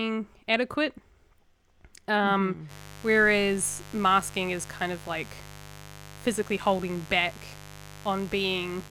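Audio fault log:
2.67–8.91 s, mains buzz: from 2.67 s to the end of the speech, a steady, raspy buzz sits under everything at about 20 dB below the speech. Its edge comes from sharp switching spikes arriving twice per cycle of the 50 Hz supply, so the interference is not a clean hum but a dense stack of 50 Hz harmonics climbing well into the kilohertz range, the kind of pickup a dimmer, rectifier or unshielded lead lets into the audio path.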